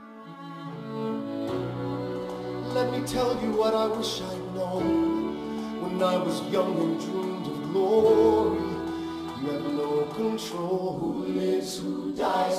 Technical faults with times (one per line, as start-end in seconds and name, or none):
12.25-12.28 corrupt frame decoded